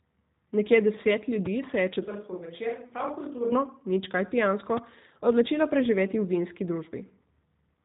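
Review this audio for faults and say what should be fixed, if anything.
The G.729 codec's low-rate model rebuilds the speech from a vocal tract filter, a pitch predictor and a few pulses per frame, which fits an 8 kbit/s stream. Everything above 3.8 kHz is removed, and the speech sounds plainly rough and synthetic throughout. Sending the audio over a wideband or higher-bitrate codec instead of G.729 would avoid this.

A sudden voltage step, likely from a plug, switch, static discharge or driver glitch, adds a loud pop at 1.46 to 1.48 s (a few decibels above the speech) and at 4.77 to 4.80 s (about 15 dB above it), with the speech continuing underneath. Securing connectors, grounding the setup and keeping switches and cables untouched while recording would prevent these.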